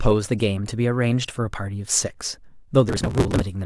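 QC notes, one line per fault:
2.89–3.42 s, processor overload crackle: A gritty, tearing crackle rides on the speech for about half a second, then stops. The processor could not finish its small audio buffers in time, and dozens of deadlines were missed in a row. Each missed block was skipped, not held. That leaves a tiny hole with hard edges. The holes come every few milliseconds, which fits a buffer of around 5 ms, and together they fuse into one rough burst.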